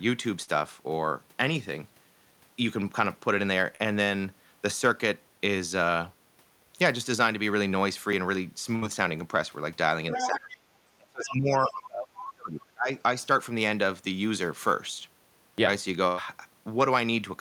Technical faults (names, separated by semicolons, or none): short concealed packet loss; dropped buffer (overrun); burst of packet loss; other side's voice leaking through; speech suppressed in double talk